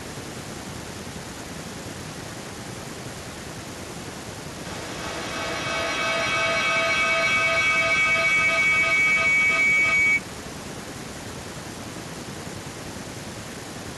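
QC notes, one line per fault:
4.65–10.31 s, feedback howl. A tone near 2 kHz swells to about 15 dB above the speech. It pulses roughly every 300 ms, the loop's round-trip delay. Each pass from loudspeaker back into microphone adds level, so the ring grows until the loop breaks.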